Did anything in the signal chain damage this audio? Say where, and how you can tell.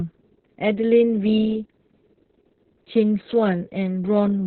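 Yes, at the codec stage. Heavy Opus voice compression is present throughout. Nothing reaches above 4.2 kHz, so the speech is muffled and narrowband. It sounds hoarse and slightly robotic. That fits SILK at a very low bitrate, near 6 kbps, with coarsely coded excitation.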